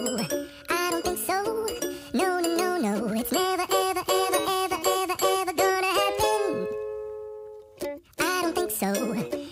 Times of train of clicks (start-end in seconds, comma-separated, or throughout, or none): none